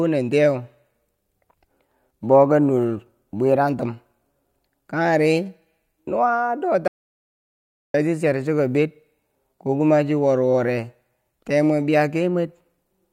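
At 6.88 s the input feed was likely lost while recording carried on writing silence, an audio dropout to silence. The speech breaks off abruptly into dead silence with no room tone, resuming mid-flow at 7.94 s, so about 1.06 s of speech is missing.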